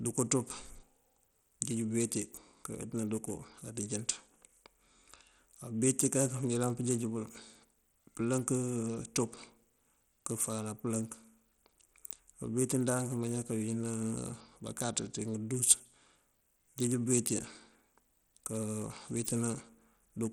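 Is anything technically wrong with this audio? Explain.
Yes. Throughout the speech, the upper frequencies thin out and flicker in and out, and a gritty, grainy noise clings to the voice, with aliasing riding on it. This is likely Bluetooth SBC compression at a very low bit budget, which fits roughly 80 kbps. SBC splits the signal into a few wide sub-bands and hands out bits without a hearing model, so the weak top bands get starved and the rest are coarsely quantised.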